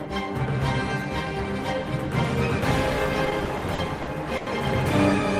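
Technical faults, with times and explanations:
3.25–4.48 s, repeated stalls (stutter): late packets emptied the jitter buffer ten times, and each gap, up to 90 ms, was filled by continuing the last sound, fading it in the longer waits, so it drags; this shows as smeared, repeated bands on a spectrogram.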